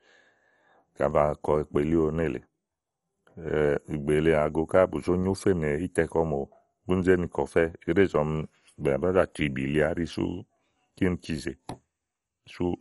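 Throughout the speech, the audio has likely been through MP2 compression at a starved bitrate, consistent with about 48 kbps. Upper sub-bands are switched off, leaving nothing above 11.3 kHz, so the speech sounds dull, with a plainly audible gurgling, granular grain.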